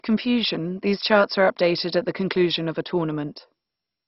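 All the way through, the speech sounds dull and gurgly with nothing above about 5.6 kHz, likely MP2 compression at a very low bitrate, around 32 kbps, starving the upper sub-bands.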